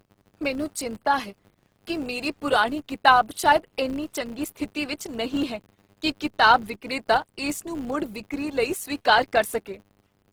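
Filter restarted on every block, throughout the speech: the filter loses its state at each block boundary, so a buzz at 100 Hz rides on the signal and tracks its level.

Low-bitrate audio saved at a high bitrate, also throughout: the artefacts of the first encoding persist, likely from a low-bitrate Opus encode, around 16 kbit/s, re-saved as high-bitrate MP3.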